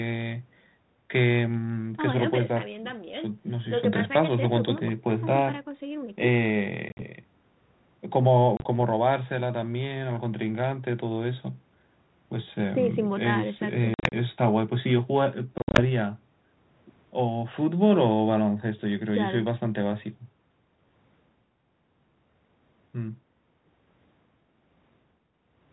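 Packets are lost on this ADPCM call, and the receiving decoder's predictor and step size drift away from the sender's. The speech breaks into hard-edged silent gaps at 6.89–7.03 s, 8.57–8.66 s, 13.94–14.14 s and 15.58–15.82 s, losing 50 to 140 ms each, then resumes slightly distorted before settling.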